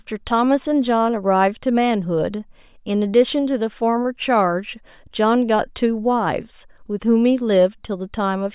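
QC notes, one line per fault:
No faults heard on this speech clip.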